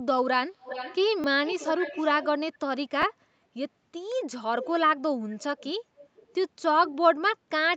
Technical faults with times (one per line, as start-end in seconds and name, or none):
0.59-0.98 echo leak
1.21-1.24 repeated buffer
1.46-2.26 echo leak
3.02 repeated buffer
4.62-4.71 echo leak
5.39-5.65 echo leak
5.96-6.34 echo leak
6.85-6.89 echo leak